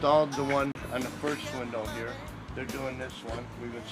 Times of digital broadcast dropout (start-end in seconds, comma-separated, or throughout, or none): 0.72-0.75